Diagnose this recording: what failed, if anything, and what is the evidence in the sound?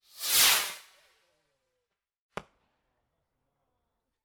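Nothing failed: the recording carries no evidence of a fault at any stage.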